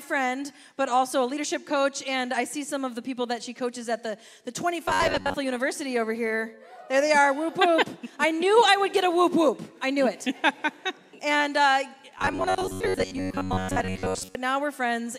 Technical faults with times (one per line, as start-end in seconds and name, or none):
4.88-5.34 robotic sound from repeated short buffers
12.18-14.35 robotic sound from repeated short buffers